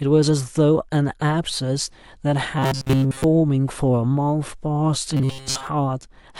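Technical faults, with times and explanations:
2.59–3.24 s and 5.17–5.67 s, robotic sound from repeated short buffers: the speech becomes a rigid metallic buzz at 134 Hz, likely from a roughly 7.5 ms segment looping while most real audio is skipped. A spectrogram shows flat, evenly spaced harmonics; the waveform shows identical repeating cycles.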